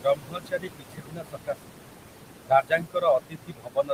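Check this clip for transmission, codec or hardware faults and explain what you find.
The clip's faults come from the noise-reduction stage, not the transmission path or the codec.

Noise suppressor artifacts run through the whole clip. The background sinks by about 21 dB in the gaps and swells back under the speech. A suppressor does this when it estimates steady noise band by band and attenuates those bands every frame. The room noise sits only about 6 dB below the speech, so it is pushed hard.

Speech cut by the noise suppressor occurs from 0.02 to 1.72 s and again from 2.45 to 3.93 s. In both stretches, parts of the speech sound swallowed or faded, dropping away by as much as about 22 dB. In the first stretch, roughly a second and a half of the speech is affected. The suppressor mistook these low-level speech components for the background noise and turned them down along with it, so quiet detail is lowered with the background.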